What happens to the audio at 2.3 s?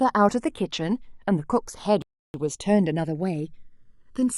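At 2.3 s the speech is in the middle of a rebuffering stall that runs from 2.02 to 2.34 s: playback ran out of downloaded audio, fell silent for about 0.32 s, then resumed exactly where it stopped. On a waveform this is a flat gap; on a spectrogram, a blank vertical band.

The channels are drifting apart across the whole clip, so the two sides sit on slightly different clocks, consistent with roughly 200 ppm, and the offset slides toward under a millisecond. Summed to mono, this is a slow flanging, with comb notches sweeping gradually across a spectrogram.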